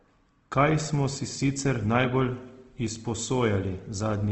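A speech recording with compression damage that is plainly audible from start to finish, most likely Opus compression at a low bitrate, with the sound fitting roughly 16 kbps in the codec's CELT music mode. Nothing is present above 8.2 kHz, consistent with a wideband setting. Instead of MP3-style swirling, the bands are kept filled with folded or noise-like content, so voiced tones come across rough, grainy and noisy rather than clean.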